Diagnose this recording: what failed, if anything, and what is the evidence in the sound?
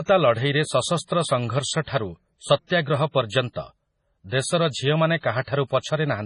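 Throughout, the speech sounds watery and swirly, with nothing above 10.5 kHz: likely heavy MP3 codec compression dropping weak frequency lines, which fits about 24 kbps.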